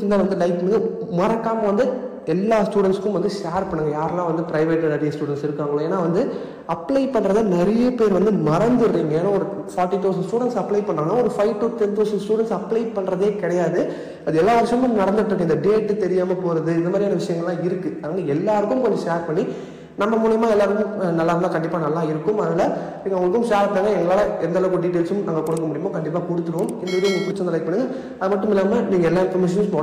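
Hard clipping runs throughout: the signal overdrives a stage by about 5 dB, flattening roughly 4% of samples, so peaks crackle with added high harmonics.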